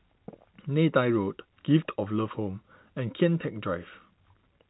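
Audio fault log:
The speech sits within normal G.711 telephone coding, with nothing above 3.9 kHz and at most a faint level-following quantisation hiss, and there is no fault to log.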